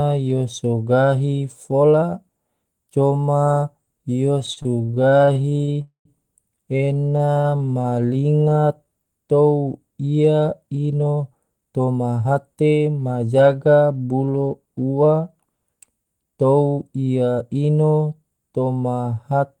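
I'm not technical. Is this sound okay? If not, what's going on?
No, there are several network playback problems in this speech clip.

Repeated stalls (stutter), 4.39 to 5.78 s and 6.77 to 7.94 s: the sound arrived late again and again, so the receiver kept stretching out what it already had. That happened 18 times in the first stretch and 15 in the second, each under 40 ms, so the speech drags and stutters without losing anything.

Call audio freeze, 5.81 to 6.08 s: the audio was likely held up in transit long enough for the receiver to run out completely. It filled about a quarter of a second, with the last sound fading into roughly 0.11 s of silence, then carried on where it stopped.

Jitter buffer slow-down, 7.99 to 8.90 s: with its reserve running low, the receiver repeated tiny slices of sound to build it back up. The speech plays at 84% speed at the same pitch, sounding drawn out.

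Jitter buffer speed-up, 10.62 to 13.15 s: the receiver had built up too much waiting audio and trimmed out small pieces to catch up, about 0.4 s in all. The speech runs at 115% speed at the same pitch and sounds hurried.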